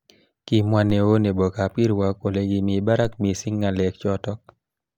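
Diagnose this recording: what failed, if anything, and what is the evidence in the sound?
A DC step occurs twice, at the converter or analogue input stage. At 0.90 s, just before "neo nebo kab", and again at 3.05 s, between "kole kimi" and "missing ngalek", the waveform's zero line jumps by about -22 dBFS, heard as a brief low thump while the speech carries on unchanged. Each offset then drains away through a high-pass of about 5 Hz, the behaviour of a coupling stage bleeding off a sudden bias shift.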